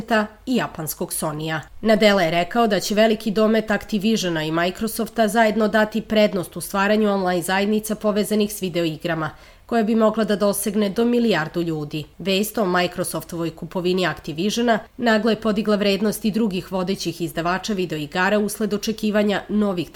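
Nothing in this one calls for comment, as there's no technical fault anywhere in the clip for a listener to point to.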